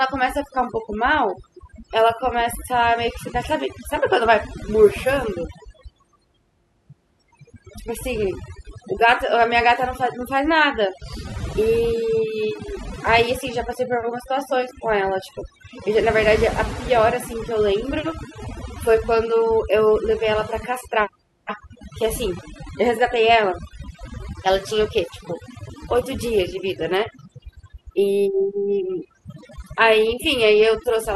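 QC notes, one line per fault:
Throughout: overdone noise removal. The noise reducer was pushed far too hard, so any frequency band sitting close to its noise estimate is pulled almost to nothing. The low-level parts of the speech get caught in that cut along with the background noise. Between phrases the floor drops to near silence dotted with twinkling, chirpy specks where isolated bands flicker on and off. The voice is stripped of its quieter detail.
23.84 to 31.15 s: periodic clock jitter. Interference is wobbling the converter's sample clock at a steady rate of around 400 Hz, so every component of the speech picks up sidebands spaced that far above and below it. Higher-frequency content is hit hardest, which gives the voice a rough, metallic edge through the final section of the clip. Because the sidebands only ride on sound that is present, the grit disappears in the pauses.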